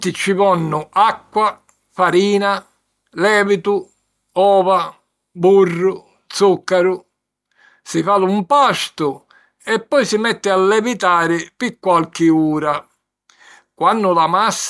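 Nothing in the speech stood out as a technical problem on listening.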